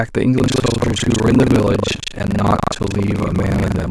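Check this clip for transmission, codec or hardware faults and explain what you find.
There is one fault, buffer tearing, running from 0.36 s to the end of the clip. The speech takes on a steady robotic buzz or rattle at 25 Hz that is present only while sound is playing. The buzz comes from the writer and reader of a ring buffer slipping so they cross within every 40 ms period. About 40% of each period then repeats audio from around 150 ms earlier, with a hard splice on each side.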